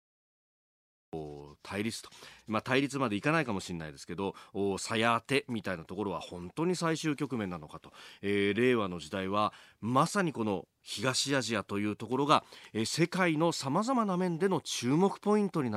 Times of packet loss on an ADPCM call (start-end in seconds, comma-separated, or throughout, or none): none